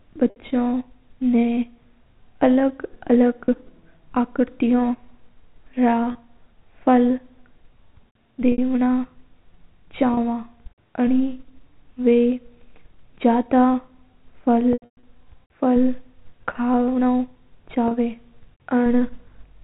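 At 0.30, 3.45, 6.12, 8.52, 10.14, 14.73 to 15.03 and 17.88 s the speech shows packet loss with pitch repetition. Each gap is bridged by looping the last pitch period, giving a brief held, buzzy tone: 30 ms at most points, 60 ms at 0.30 and 8.52 s, which fits two lost packets. Around 14.73 s the losses scatter over 300 ms with a 120 ms run, so the repetition fades toward silence before speech cross-fades back, all over a band-limited telephone channel.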